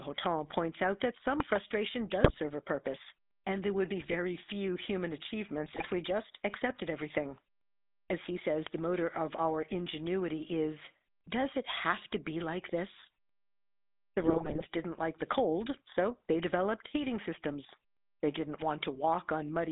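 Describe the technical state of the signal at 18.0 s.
At 18.0 s, as throughout, the speech carries GSM full-rate codec damage: regular-pulse excitation through a vocal-tract model gives plainly audible buzzy roughness, band-limited to about 250 Hz–3.7 kHz.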